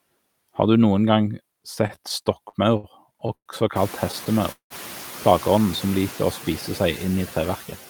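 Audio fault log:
throughout, noise suppressor artifacts: The suppressor treats steady room noise as a target and lowers the bands it judges to be noise frame by frame, cutting it by about 14 dB. The background therefore drops away in pauses and swells back beneath speech. This is most noticeable after about 3.5 s, when the room noise rises by about 22 dB to sit only about 18 dB below the speech.
1.87–3.49 s and 4.12–4.73 s, repeated stalls (stutter): Packets arrived late or too slowly for playback, so the jitter buffer repeatedly emptied and the receiver stretched the last sound until data resumed. The first run has ten stalls totalling 322 ms, about a fifth of that span, with the longest at 110 ms. The second has four stalls totalling 217 ms, about 35 percent of the span, with one of 186 ms that fades out. No speech is lost, but it drags and stutters.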